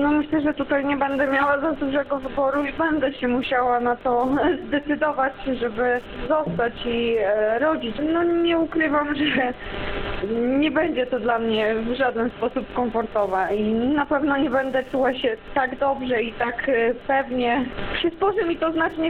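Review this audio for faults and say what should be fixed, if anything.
Wi-Fi interference runs throughout: a nearby radio's beacon, rectified by the audio circuit, ticks every 102.4 ms, roughly 40 dB below the sound. Move the radio away or shield and filter the audio wiring.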